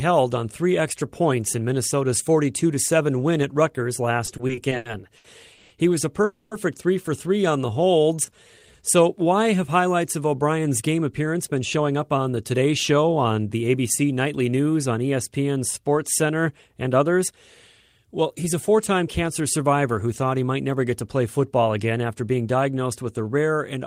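From 4.25 to 5.72 s the speech drags and stutters through eight small hitches, the longest 140 ms, stretching this stretch with about 390 ms of filled-in sound, roughly a quarter of it. These are repeated stalls (stutter): packets kept arriving late, the jitter buffer ran dry again and again, and the receiver extended the last sound each time rather than dropping anything.

At 6.24 s, right after "was a", the sound hangs as a fading buzz for 270 ms, dipping briefly to silence, then resumes exactly where it left off. This call audio freeze was likely caused by packets held up in transit, emptying the jitter buffer and adding a 270 ms delay.

From 7.42 to 8.78 s the speech slows to 86% speed at unchanged pitch, sounding drawn out, with about 198 ms added. This is a jitter buffer slow-down, where the receiver repeated single pitch periods to rebuild a reserve of audio.

After "why have highlights of", from 10.49 to 15.13 s, the speech runs hurried at 108% speed with its pitch intact, shedding around four tenths of a second. 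The same happens from 21.79 to 22.55 s, after "get to play football" and before "with a", at 109% with roughly 70 ms gone. Both are jitter buffer speed-ups, where the receiver trimmed short pitch-period pieces to work off excess buffered delay.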